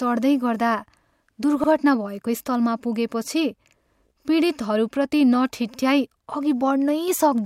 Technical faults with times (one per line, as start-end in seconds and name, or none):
5.74-5.79 overlapping chunks